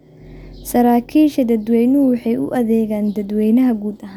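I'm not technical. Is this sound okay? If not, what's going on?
Yes, it's fine; nothing wrong can be heard.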